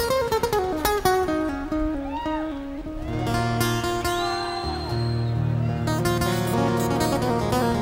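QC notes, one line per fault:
No faults heard anywhere in this clip.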